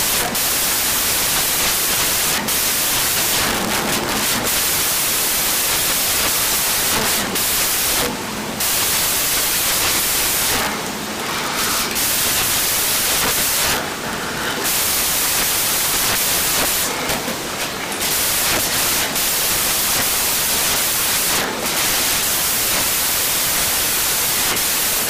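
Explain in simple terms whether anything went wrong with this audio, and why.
The program reading this file put each sample together from the wrong bytes, from start to finish. It was probably off by one byte or had the byte order reversed, so the tiny, rapidly changing details of each value ended up as the biggest part. This is called samples built from the wrong bytes. The result is loud, harsh noise across the whole 25 seconds, close to white noise on the louder sounds.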